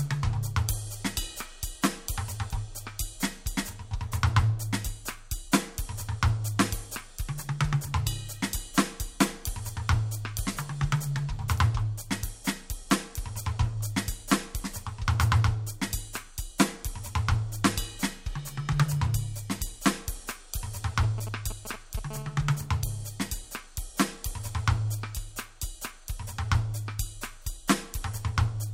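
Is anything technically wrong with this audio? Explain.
Yes. Two related cases of mobile-phone interference appear in the last part of the music.

From 21.03 to 21.99 s there are GSM signalling bursts. A nearby 2G handset is exchanging short bursts of control traffic with the network, and some stage of the audio circuitry rectifies that radio energy into the signal. The result is a galloping dit-dit-dit of ticks and brief buzz fragments at a 217 Hz repetition rate. It sits roughly 10 dB below the music.

From 22.11 to 23.07 s this changes to a steady GSM phone buzz, the pattern of a handset in an active call. The transmitter now pulses continuously at 217 Hz, and the rectified envelope becomes a hard, raspy tone at that frequency with a dense series of harmonics. It has no musical relation to the programme material. Its level is about 20 dB below the music, lower than the earlier bursts but still harsh because of its spectral content.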